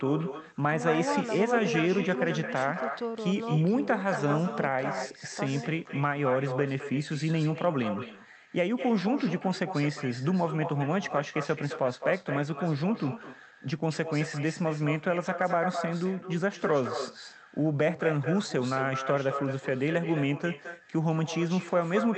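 Throughout the speech, an echo with no canceller shadows every phrase. The far end's loudspeaker leaks into its microphone and nothing removes it, so a thinner copy returns about a fifth of a second later, about 9 dB down. Spectrograms show a fainter ghost of each syllable shifted right.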